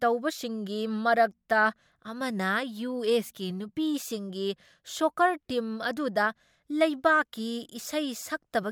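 No technical faults are audible in this speech.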